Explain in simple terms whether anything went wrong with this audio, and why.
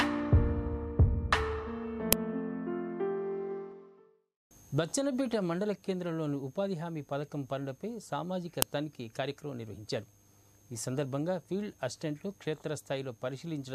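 Two brief loud cracks, at 2.13 s and 8.62 s, are an uninitialised buffer fault. The playback system sent out a block of memory before any audio had been written into it, so leftover data was played as if it were sound. The first crack lasts about 2.9 ms, which fits a 128-sample buffer. The second lasts about 1.45 ms, which fits a 64-sample buffer.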